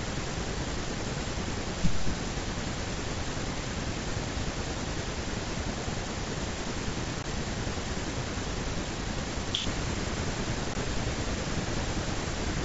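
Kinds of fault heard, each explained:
Unconcealed Bluetooth headset packet loss: voice data between headset and phone went missing and nothing was patched over the gap, so the speech simply cuts out. Two such holes occur, at 7.23 s and 10.74 s, each about 15 ms long, which fits a pair of consecutive 7.5 ms mSBC frames dropped on the wideband link. Both gaps start and stop abruptly rather than as a smooth dropout.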